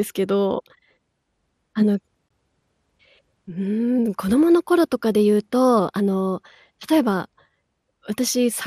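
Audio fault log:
throughout MP2 compression. The sound is dull, with gurgling, granular distortion. Upper sub-bands flicker off when bits run short, which likely fits about 80 kbps.
2.29 s Block of digital silence. About 20 ms of sound cuts out with no fade, heard as a short hole.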